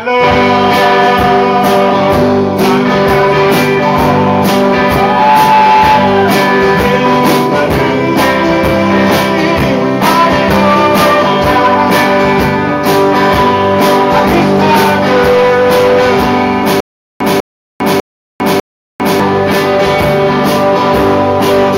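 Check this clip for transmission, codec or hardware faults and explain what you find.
One transmission fault is present: a stutter with silent gaps from 16.80 to 19.20 s. The same 197 ms fragment of sound plays four times, each followed by 401 ms of dead digital silence, so it repeats at an even 598 ms pace before normal playback resumes. The likely cause is a stalled player or stream that replays its last buffered fragment at each retry, then runs dry, and whatever audio belonged to that span never arrives.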